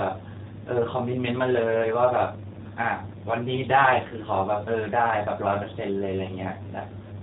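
From start to finish the speech has a slightly rough, synthetic edge and nothing above 4 kHz, the sound of the G.729 codec at 8 kbit/s. The codec rebuilds each 10 ms frame from a vocal tract filter, a pitch predictor and a few pulses, so plainly audible coding damage remains.

At 4.09 to 4.14 s and again at 5.63 to 5.66 s, the speech briefly smears into a buzzy tone or a coloured noise that fades, and then comes back weak or distorted. This is VoIP packet loss concealed by the speech codec. About 20 ms of audio went missing each time, which fits one lost packet, and the decoder stretched its last pitch and filter to cover the gap.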